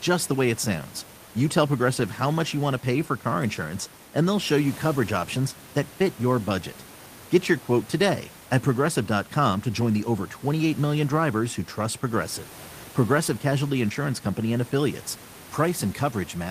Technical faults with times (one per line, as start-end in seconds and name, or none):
none